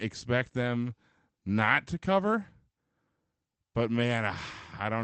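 At 1.65 to 1.67 s, just before "to cover", there is a lost packet rebuilt from error correction. One 20 ms packet went missing. The next packet carried a low-bitrate copy, so there is no gap. That short stretch sounds rougher and noisier, within the call path's 8 kHz band.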